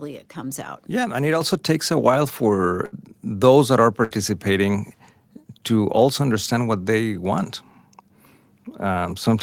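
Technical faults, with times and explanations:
1.41 s, microphone volume stepped up: The call software judged the microphone too quiet and raised its input volume in a single step, just before "takes a while". Because the change happens at the device, before anything else in the chain, voice and background rise together by about 7 dB at one instant rather than gradually. The sound abruptly becomes louder, with the room noise lifting along with it.
2.85 to 2.94 s and 4.04 to 4.12 s, burst of packet loss: Twice, a run of audio never reached the receiver in time to be played, about 60 ms each time. The receiver concealed the gap by extending the last sound it had for about 63 ms while fading it down. Playback then resumed about 60 ms further on, so that stretch is simply missing. The first burst falls just before "those that are", where the sound smears into a decaying tail and then jumps forward.
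2.94 s, lost packet rebuilt from error correction: Right after the first burst, one more packet was lost. The next packet carried a low-bitrate backup copy of it, Opus in-band forward error correction, and the decoder played that copy, so there is no further gap. Those 20 ms, at the start of "those that are", come from a cruder, more heavily compressed version of the signal. They sound rougher and noisier than the audio around them.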